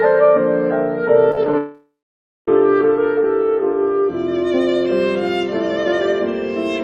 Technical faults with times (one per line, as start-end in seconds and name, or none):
1.31-1.54 repeated packet loss (robotic sound)
1.58-2.48 long network dropout